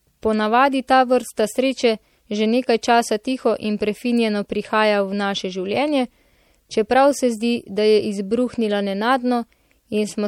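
Throughout the speech, the top end is cut off, and s sounds turn watery and chirpy. This plainly audible damage is likely MP3 compression, at a rate fitting 64 kbps.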